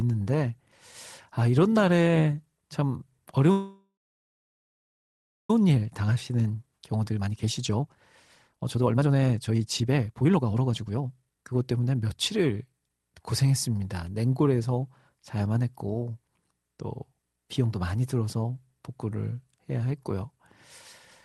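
From 3.51 to 5.50 s the speech stalls: the last sound stretches into a fading buzz, then about 1.6 s of silence, and it resumes exactly where it stopped. This is a call audio freeze, likely from delayed packets draining the jitter buffer, adding about 2 s of delay.

A jitter buffer speed-up follows, as the receiver trims pitch-period slices to work off the backlog. From 5.60 to 7.96 s speech runs hurried at 119% with unchanged pitch, shedding roughly half a second. From 8.48 to 12.90 s it rushes harder at 134%, cutting roughly a second and a half. Across the Opus call path, content above 12 kHz is absent.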